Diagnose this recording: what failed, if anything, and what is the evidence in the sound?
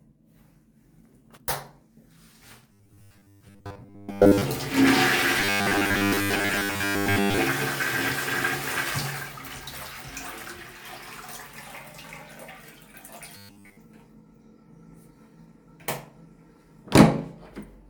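Robotic sound from repeated short buffers occurs at 2.73–4.42 s, 5.40–7.38 s and 13.37–13.78 s as a rigid 100 Hz buzz. The likely cause is a starved driver or buffer stage looping a 10 ms block through most of each stretch. Spectrograms show harmonic lines every 100 Hz, and waveforms show identical repeating cycles.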